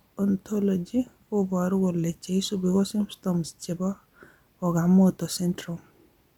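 Nothing technically wrong turns up anywhere in this short speech recording, so there's nothing here to flag.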